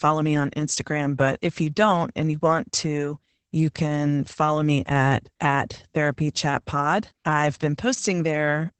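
From start to finish the speech carries Opus voice compression in its SILK mode, and the damage is plainly audible. The coder has kept a wideband range, so nothing remains above about 8.8 kHz, and it has coded the excitation coarsely, which leaves the voice muffled, hoarse and faintly robotic, consistent with a bitrate around 12 kbps. A spectrogram would show a hard ceiling near 8.8 kHz with smeared, grainy harmonics beneath it.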